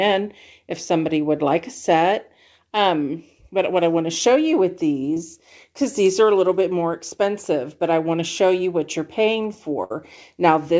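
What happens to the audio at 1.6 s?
Nothing goes wrong at 1.6 s; the audio passes through intact there, carried by the WebRTC call path with nothing above 8 kHz.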